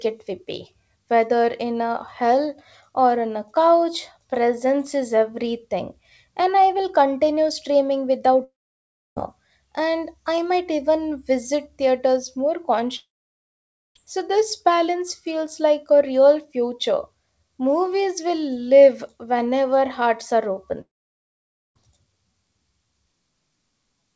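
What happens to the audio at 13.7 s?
A long network dropout runs from 12.96 to 13.96 s, just after "even visit theaters more", likely from packets never arriving. The receiver briefly stretches the last sound into a fading buzz or hiss, so by 13.7 s only silence remains until the audio resumes with about a second lost.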